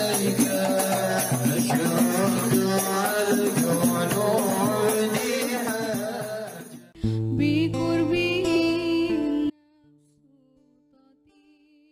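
At 9.50 s an audio dropout snaps the sound to a faint residue far below normal until the end, likely a lost feed, not a fade.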